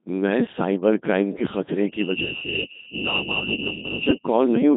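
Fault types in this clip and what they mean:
Codec 2 vocoder: the whole clip has gone through a very low-rate radio vocoder, something around 2.4 kbit/s. The speech is rebuilt from sine waves, so it comes out buzzy and robotic, heavily damaged, with nothing at all above 3.8 kHz.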